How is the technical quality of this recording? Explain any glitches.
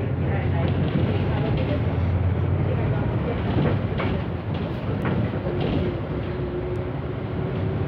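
Two isolated bit error spikes, at 5.02 s and 6.76 s, each a single flipped bit making the sample jump by a power of two. Each is heard as one sharp tick, unrelated to the surrounding sound. The first, at about -25 dBFS, lasts one sample. The second, at about -31 dBFS, spans three samples. On a waveform, each appears as a needle one to three samples wide. A spectrogram shows a thin vertical line across all frequencies.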